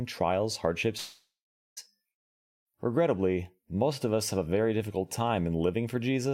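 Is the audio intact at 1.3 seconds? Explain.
No. A long network dropout likely spans 0.97 to 1.79 s. Speech smears into a fading buzz, then silence, and returns missing 0.8 s.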